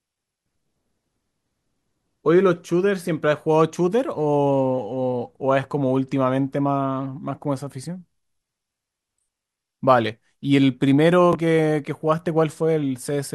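A Bluetooth stutter occurs at 11.33 to 11.35 s. The wireless link failed to deliver audio in time, so the receiver filled the gap by replaying its most recent chunk of audio. About 20 ms of speech is repeated, which fits a single lost packet. It is heard as a brief doubled flick or tiny catch rather than a sustained buzz. The speech then continues from a point slightly later, so the missing slice is skipped.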